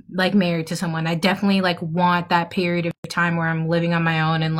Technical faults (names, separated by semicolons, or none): gap at a join of encoded pieces